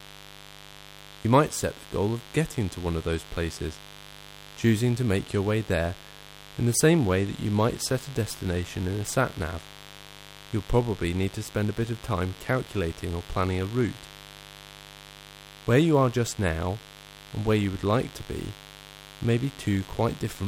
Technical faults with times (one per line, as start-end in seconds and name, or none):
0.00-20.48 mains buzz